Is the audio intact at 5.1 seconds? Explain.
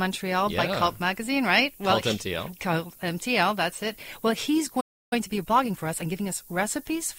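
No. At 5.1 s the sound is cut by a playback stall from 4.80 to 5.13 s. For about 310 ms there is silence, most likely because the player ran out of data. The waveform shows a flat gap, and the spectrogram shows a blank vertical band.

Over that whole stretch there is also low bit depth with noise shaping. The audio fits an 8-bit signal whose rounding error has been pushed upward, giving a thin hiss that grows toward the top of the band, roughly 20 dB below the signal. On a spectrogram it shows as a haze that brightens at high frequencies.

Right after the gap, from 5.13 to 6.35 s, time-compressed catch-up plays the audio 1.25 times faster at normal pitch. The waveform there looks denser, with cross-fade joins between the shortened pieces.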